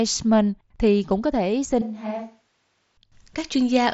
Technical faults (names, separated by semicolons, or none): switch to a distant microphone